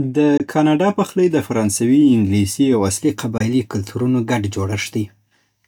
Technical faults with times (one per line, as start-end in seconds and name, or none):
0.37-0.40 Bluetooth dropout
3.38-3.41 Bluetooth dropout